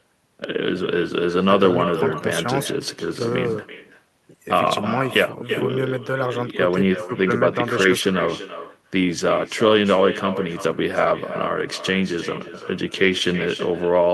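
Echo with no canceller runs through the whole of this speech clip. Every phrase returns roughly 300 ms later, about 12 dB quieter and thinner, as the far end's loudspeaker feeds its microphone and nothing subtracts that round-trip copy before sending it back.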